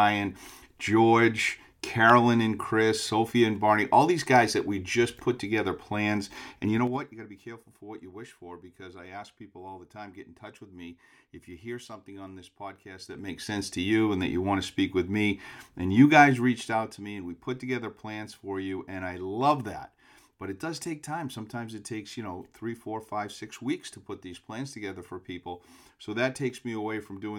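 Speech with zipper noise from 6.69 to 7.06 s, as the level drops about 15 dB in 4 dB steps, and from 13.00 to 13.56 s, rising in 3 dB steps. Unsmoothed gain jumps, roughly ten a second, tick audibly, showing as a staircase envelope and thin vertical clicks.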